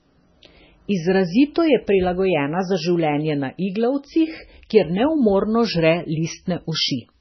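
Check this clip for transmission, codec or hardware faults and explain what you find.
The speech carries heavy codec damage from start to finish, most likely from MP3 compression at a very low bitrate, which fits roughly 16 kbps. Short of bits, the encoder discards everything above about 6.1 kHz and zeroes weaker frequency lines that flicker on and off between frames. The result sounds dull, watery and swirly, with chirpy, smeared s sounds. A spectrogram shows a hard ceiling near 6.1 kHz and patchy, blotchy gaps below it.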